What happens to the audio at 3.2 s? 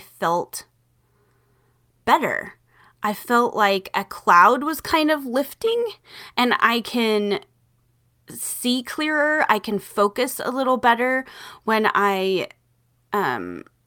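At 3.2 s the speech carries on intact, with no dropout, click, distortion or other fault at that point.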